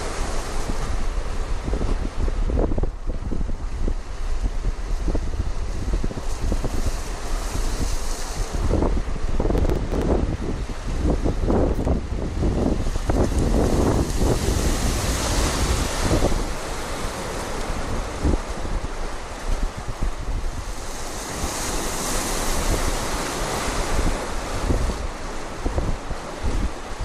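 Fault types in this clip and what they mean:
processor overload crackle: The processor fell behind its real-time deadlines and kept missing them, so for a run of short buffers, each around 10 ms, the output replayed a stale slice of old audio instead of fresh sound. Those repeated fragments, joined with hard edges, come through as a gritty, tearing crackle laid over the sound, once from 9.58 to 10.02 s and again from 21.36 to 21.78 s, clearing as soon as the load eases.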